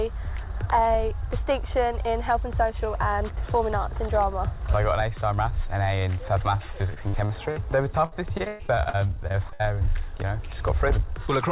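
From 6.94 to 9.62 s, repeated packet loss (robotic sound) leaves sixteen patched gaps, the longest 115 ms. Unlike one isolated dropout, they come in rapid succession, making the audio choppy, with pieces missing.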